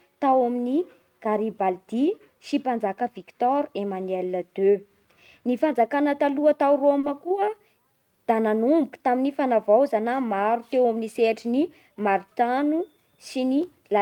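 A short stall from a late packet comes at 6.99 to 7.05 s, just after "fanjakana taloha tao". A packet missed its playout time and the jitter buffer ran dry, so the receiver held the last sound for about 40 ms until the packet arrived, then resumed from the same point. No speech is lost, but the sound is drawn out briefly with a faint buzzy dip, and everything after it runs 40 ms later.

A jitter buffer speed-up follows from 11.64 to 12.15 s, right after "sehatry ny". Too much audio had piled up in the buffer, so the receiver trimmed it by cutting out short pitch-period-sized pieces one after another, about 50 ms in all. The speech plays at about 107% speed with its pitch unchanged, so this stretch sounds hurried.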